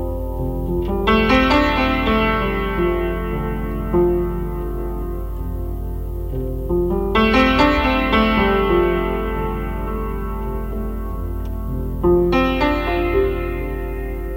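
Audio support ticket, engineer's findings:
Findings: no fault found in the audio.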